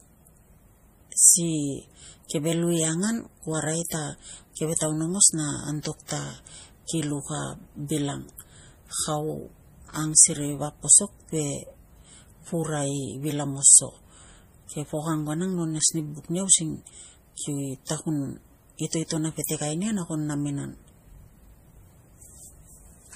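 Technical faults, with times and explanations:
Throughout, transcoding between lossy codecs: the speech carries two layers of compression artefacts at once, with nothing above 15.2 kHz. This is likely an MP3 encode at 40 kbit/s later re-encoded as AAC-LC at 48 kbit/s. The second encoder spends its bits reproducing the first one's smearing and adds its own, and the lower bandwidth limit survives the chain.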